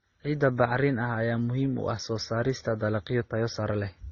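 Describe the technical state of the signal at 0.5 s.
At 0.5 s, as throughout, the speech shows likely transcoding between lossy codecs: stacked artefacts that fit low-bitrate MP3 then Opus, with spectrogram content ending sharply near 6.9 kHz.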